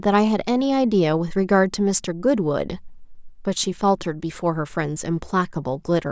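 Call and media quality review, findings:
No faults found in review.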